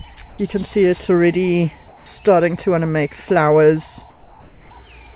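At 0.29 to 0.38 s, 1.88 to 2.06 s and 4.1 to 4.7 s, the background gives way to a flat, featureless hiss. That's comfort noise in place of the background, likely from discontinuous transmission: the sender goes quiet in pauses and the receiver synthesises noise instead. The first patch is level-matched, the second dips about 2 dB, the last about 1 dB. Everything stays band-limited to 4 kHz by the call path.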